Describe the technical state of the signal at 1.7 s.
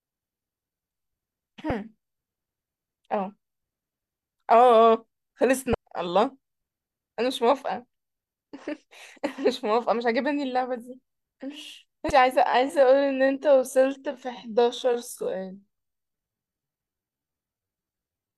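A brief blip cuts into the speech at 1.70 s. It is damaged data in a compressed stream: bytes at that point were corrupted, so the decoder misreads the affected frame, loses sync and must find the next valid frame header before clean decoding resumes.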